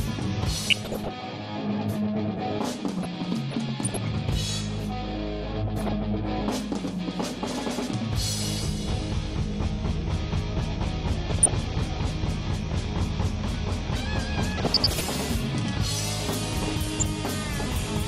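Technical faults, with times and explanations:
Throughout: MP2 compression. The audio is dull and lacks top end, with a gurgling, granular roughness that is plainly audible. Upper frequency bands drop in and out, and the remaining content is coarsely quantised. This is likely MPEG Layer II coding at a low rate, around 80 kbps. With so few bits to share among its 32 sub-bands, the encoder switches off the highest ones and quantises the rest crudely.
0.67–1.14 s, 2.98–3.97 s, 5.59–5.92 s, 11.31–11.81 s, 14.45–15.06 s, 16.84–17.10 s: DAB burbling. Each burst adds burbling over the sound, and the one near 3 s lasts almost a second. These are reception errors, around 0.3 to 0.5 percent of bits, that slipped past error correction into the MP2 data. Corrupted samples put short blips of noise in single sub-bands, and corrupted scale factors make sub-bands leap in level for up to a frame.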